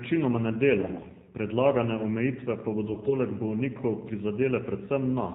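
Throughout, the speech is thin, buzzy and synthetic, with nothing above 4 kHz. This is the AMR narrowband mobile codec: 8 kHz sampling and a pulse-driven vocal-tract model, with the degradation plainly audible. The sound fits a low mode near 7.4 kbps.

From 0.80 to 1.04 s, just before "predlagane omejitve pa", the voice keeps its pitch and level but turns hoarse and gargly. It happens again from 2.88 to 3.15 s, right after those words. These are AMR bit errors, with flipped bits misplacing excitation pulses and skewing fine pitch, gain and spectral values.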